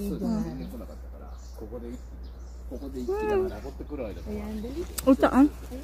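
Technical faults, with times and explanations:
Throughout, mains hum: a steady, prominent low tone at 60 Hz sits under everything, strong at roughly 10 dB below the signal. It points to a ground loop or nearby transformer leaking the power-line frequency into the signal path.
2.46 to 5.83 s, channel delay (comb filtering): the very top end turns slightly dull and airless. One channel lags the other by roughly a single sample, so summing to mono cancels content near 20 kHz, placing the first notch at the edge of hearing.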